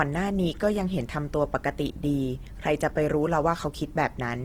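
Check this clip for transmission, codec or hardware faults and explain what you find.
One codec fault is present, lasting the whole clip. Throughout, the speech sounds noisy, rough and grainy, likely from Opus compression in CELT mode at a rate pointing to about 16 kbps. Starved bands are filled with noise, so a spectrogram shows fullband content to 20.2 kHz, with speckled, blurred harmonics.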